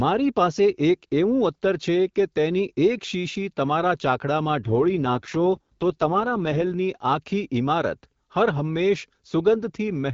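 In this speech clip, from 4.62 to 6.74 s the voice turns rough and synthetic while keeping its full bandwidth without gaps. This is an AMR rate drop, consistent with the AMR-WB (HD Voice) codec falling from 12.65 to 6.6 kbit/s and spending bits on error protection.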